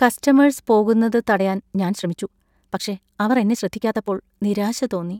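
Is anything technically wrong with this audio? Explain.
Yes. A time-stretched section runs from 1.31 to 4.27 s, right after "കസ്റ്റമേഴ്സ് പോകുന്നത്". The speech there plays 1.46 times faster at unchanged pitch, likely because software shortened it by dropping tiny slices. The pace suddenly lurches, sounding rushed.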